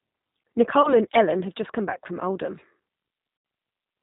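The whole clip runs through the G.729 codec, and it's plainly audible. Nothing above 4 kHz survives, and the speech has that slightly rough, synthetic edge you get when it's rebuilt from a vocal tract model and a few pulses per frame, which fits an 8 kbit/s G.729A link.

At 0.82 s there's VoIP packet loss concealed by the speech codec. About 20 ms went missing, which points to a single lost packet. The decoder carried on from its last pitch and filter settings, so the sound smears into a short stretched patch. Because each frame builds on the previous one, it stays off until about 0.96 s.

At 3.37 s it happens again, and it's worse. Roughly 80 ms dropped out, which suggests four packets in a row. The concealment stretches the sound out and it fades as the gain drops frame by frame, and it only settles back around 3.45 s.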